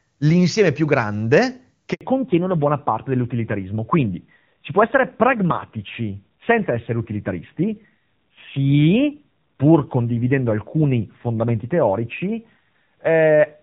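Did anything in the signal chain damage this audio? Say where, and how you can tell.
Yes. At 1.93 s the speech cuts out for 80 ms, until 2.01 s. This is a handover gap on the network: no speech frames arrived while the call switched links.

From 2.01 s to the end, everything above 4 kHz is gone and the speech turns duller and rougher. This is a network-side fallback to narrowband, from clean HD Voice to what sounds like AMR-NB at around 7.4 kbit/s.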